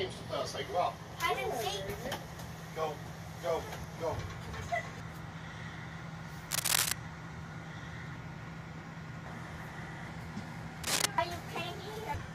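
Cable scratch noise appears twice, from 6.51 to 6.92 s and again from 10.83 to 11.06 s. Each time a dense, uneven burst of scratching and rustling sits over the sound, roughly 10 dB louder than the audio itself. The likely cause is a worn cable, connector or control being moved, so its contact resistance jumps around rapidly and injects crackly noise for as long as the contact is disturbed.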